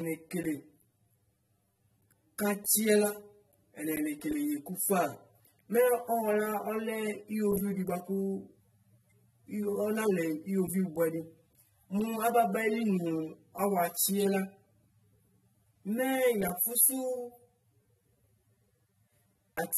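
From start to finish, the speech carries channel delay (comb filtering). One channel arrives around 10 ms behind the other, and when the two are folded to mono, whatever they share cancels at evenly spaced frequencies, the first near 50 Hz and the rest about every 100 Hz above it. The result is a hollow, phasey colour that stays fixed over time. Unlike a codec fault, the notches never shift or flutter with the signal.

Running alongside it for the whole clip is damage that is likely AAC compression, plainly audible and pointing to a low bitrate on the order of 24 kbps. Nothing is present above 13.6 kHz, and sibilants and sustained vowels take on a smeared, warbling, slightly fizzy texture as the coder discards or fills in spectral detail frame by frame. That shifting grain, together with the hard upper cut-off, sets it apart from the static notching of the delay.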